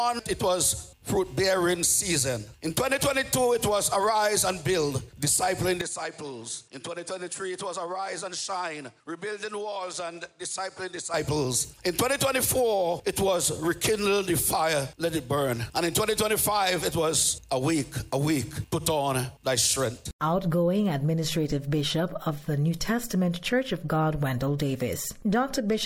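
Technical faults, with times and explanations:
5.81–11.14 s, input likely switched to a poorer device: sound dulls, drops about 10 dB, and on the spectrogram stops at 10.6 kHz over a faint new noise floor.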